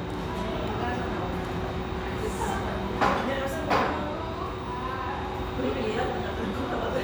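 No technical faults can be heard anywhere in this recording.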